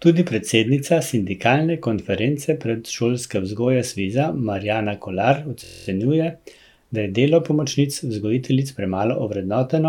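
A system hang loop runs from 5.64 to 5.88 s. The playback side stalled while the sound hardware kept replaying the same stretch of its ring buffer, so a single 23.2 ms slice of the speech repeats exactly ten times, which fits a 1024-sample buffer. Because the slice is so short, the repetition fuses into a steady buzz at about 43 Hz rather than a stutter. Little or no audio seems to go missing around it.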